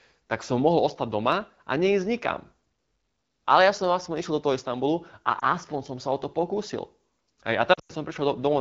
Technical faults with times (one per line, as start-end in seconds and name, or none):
5.39-5.44 lost AMR speech frames
7.74-7.91 lost AMR speech frames